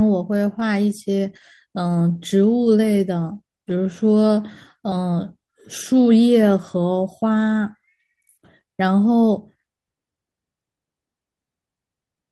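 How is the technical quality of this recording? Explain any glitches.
The technical quality of this recording is sound, with no glitches to explain.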